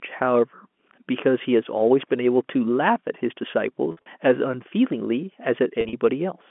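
Packet loss with pitch repetition at 3.92–4.06 s and 5.81–5.93 s: about 100 ms and 80 ms went missing in short runs of up to 50 ms. The receiver filled each hole by repeating the last pitch period, so the sound briefly hangs in a buzzy hold under the band-limited telephone tone.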